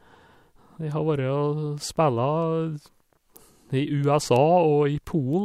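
Word clock ticks run from 0.16 s to 5.33 s, about fifteen sharp clicks at a steady rate of roughly one every third of a second. The receiving device runs on its own clock, drifting about 70 ppm from the sender's, so one sample is dropped or repeated at each slip.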